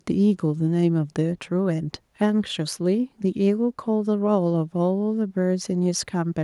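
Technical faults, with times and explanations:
No technical faults can be heard in this speech clip. There is nothing here that needs a time or an explanation.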